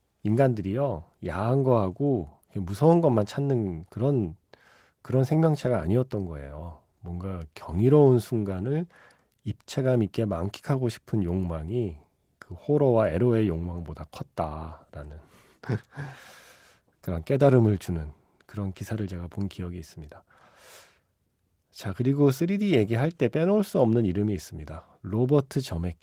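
A speech recording with no technical faults to report.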